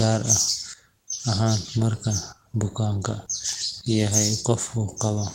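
No technical faults can be heard anywhere in the speech recording. Nothing in it needs a time stamp or an account of something going wrong.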